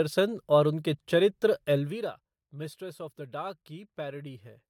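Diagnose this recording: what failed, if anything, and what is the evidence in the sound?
Nothing here failed that I can hear; the speech recording comes across as intact at every stage, from wiring and conversion through to playback, with no sign of trouble anywhere in it.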